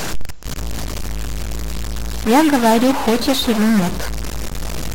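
From start to finish the speech carries a harsh, buzzy distortion that fits a stuck bit, likely one converter data line held at a fixed value. About half the samples jump by a fixed step of roughly -20 dBFS. Unlike clipping, the grit doesn't wait for loud peaks. Unlike plain hiss, the pauses fill with a rough, signal-shaped noise that flips with the sign of the quiet waveform.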